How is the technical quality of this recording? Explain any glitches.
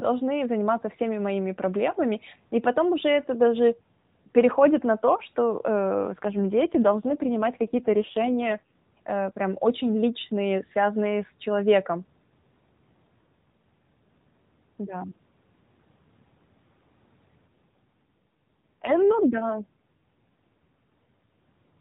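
The speech comes through an AMR narrowband mobile codec, with nothing above 4 kHz and light coding roughness, and it has two stretches of AMR rate drop. From 5.95 to 8.72 s and again from 17.48 to 20.86 s, the voice turns buzzier and more synthetic while the bandwidth stays the same and there is no gap. The sound fits the network switching the codec from 12.2 kbps to 5.9 kbps to protect a weak link. That leaves fewer pulses to model the voice until the rate recovers.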